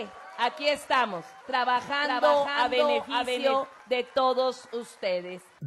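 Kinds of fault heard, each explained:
Doubled audio track: from about 1.76 s to 3.6 s, a second full-band copy of the sound trails the original by roughly half a second, around 5 dB quieter, dry with no decay, and it cuts in and out abruptly. It's likely a slower second capture path mixed back in.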